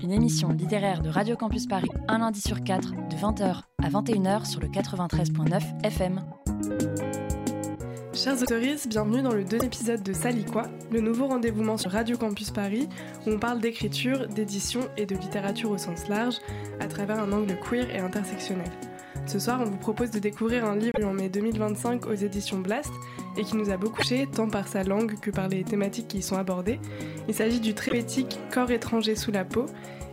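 A likely broken MP3 bit reservoir, with frames dropped so the following ones decode against the wrong data, makes the audio jump ahead and garble for 40 to 66 ms, about two or three 24 ms frames, at 1.86, 8.44, 9.59, 11.82, 20.92, 23.97 and 27.88 s.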